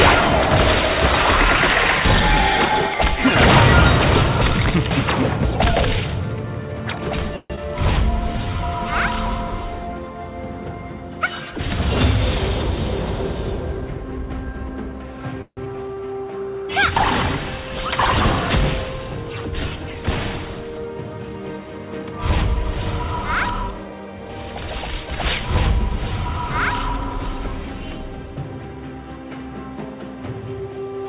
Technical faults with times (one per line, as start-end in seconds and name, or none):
7.36-7.59 long network dropout
8.12-8.58 jitter buffer slow-down
15.42-15.59 call audio freeze
15.65-15.67 skip ahead
15.76-16.26 jitter buffer slow-down
22.02-22.76 jitter buffer speed-up